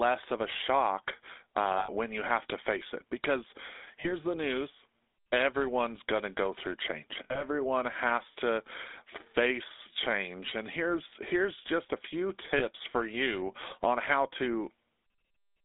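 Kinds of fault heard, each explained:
GSM full-rate codec: the speech runs through the old 13 kbps GSM coder, which rebuilds the voice from a vocal-tract model fed with sparse regular pulses, so it comes out buzzy and gravelly, and the line only carries roughly 250 Hz to 3.6 kHz, leaving it thin and boxy.
Lost GSM frames: four dropouts where the decoder just repeated its last good frame, giving a brief rough metallic ring. They fall at 1.78 s, at 4.0 s before "the news everyone's going", at 7.24 s after "to go through change", and at 12.58 s after "just a few".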